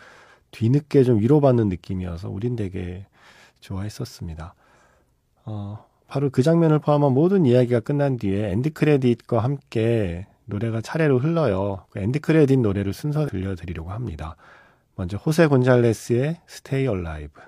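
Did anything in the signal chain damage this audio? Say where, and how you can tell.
Yes. The compressed stream carries damaged data at the codec stage. Corrupted bytes make the decoder misread frames and lose sync until it finds the next valid frame header. In the speech this shows up as brief chirps or blips from 6.78 to 6.84 s and from 13.24 to 13.30 s.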